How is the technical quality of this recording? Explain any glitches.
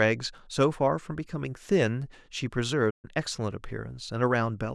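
The recording has one clear glitch, a playback stall in the speech at 2.90 s. The speech cuts off mid-flow and the output falls silent for about 130 ms, resuming by 3.05 s. The likely cause is that the player ran short of data or its audio thread was briefly blocked, so nothing reached the output until it recovered. On a waveform this shows as a sudden flat line; on a spectrogram, a vertical band empty across all frequencies.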